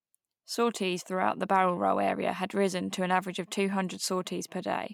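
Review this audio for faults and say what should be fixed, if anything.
No faults found in this speech recording, so nothing needs fixing.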